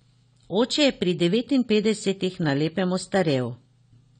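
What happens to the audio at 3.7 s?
At 3.7 s, as throughout the clip, likely AAC compression at a low bitrate, consistent with about 32 kbps, strips everything above 9 kHz, leaving the speech dull, smeared and audibly fizzy.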